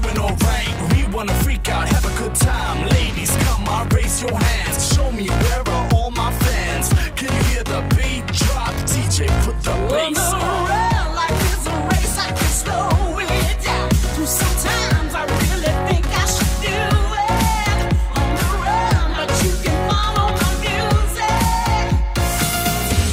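No technical faults are audible.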